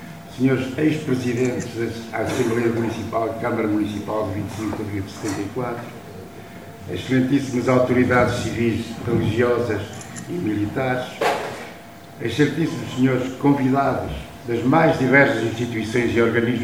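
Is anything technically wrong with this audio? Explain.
No, nothing technically wrong stood out on listening to this audio.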